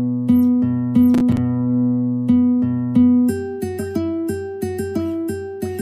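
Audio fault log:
1.14–1.38 s processor overload crackle: the processor missed a run of buffer deadlines, around seven, each leaving a hard-edged silent gap that fits buffers of roughly 5 ms. The rapid string of dropouts sounds like a gritty burst of crackle that stops once the load eases.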